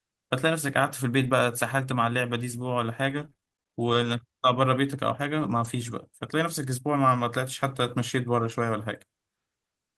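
Speech with two short rough, noisier patches at 1.23–1.29 s and 8.41–8.51 s, without any gap: a lost packet rebuilt from error correction, where the decoder played low-bitrate backup copies for about 40 ms and 60 ms. From 3.09 to 5.67 s the sound turns choppy and robotic, with fourteen brief holes of up to 23 ms. This is repeated packet loss, each hole patched by stretching the preceding sound.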